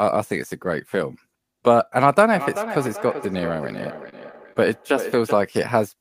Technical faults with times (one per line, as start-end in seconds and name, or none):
2.26-5.56 feedback echo between two devices
4.09-4.14 short concealed packet loss
4.53-4.57 short stall from a late packet